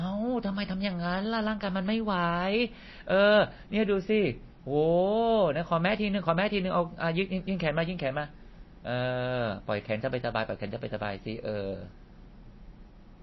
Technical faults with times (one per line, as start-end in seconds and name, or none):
0.00-13.23 MP3 compression